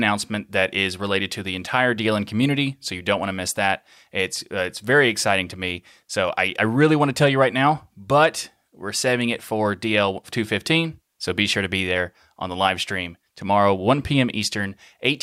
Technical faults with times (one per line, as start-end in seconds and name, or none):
none